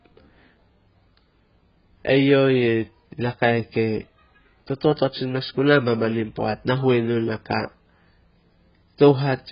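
Speech, likely squeezed through AAC compression at a starved bitrate, near 12 kbps: nothing survives above 5.2 kHz throughout, leaving it dull, smeared and fizzy on sibilants.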